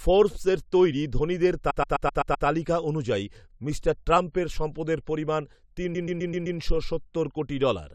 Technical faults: repeated frames

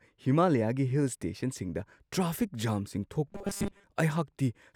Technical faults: robotic sound from repeated short buffers

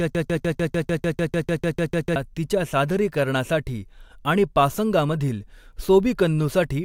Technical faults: broken-record loop

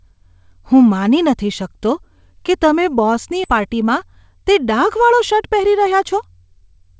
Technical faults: skip ahead; jitter buffer speed-up

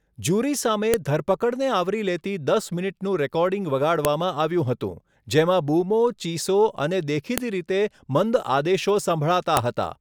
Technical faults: file header played as audio

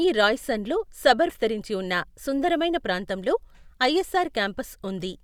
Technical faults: stream segment skipped

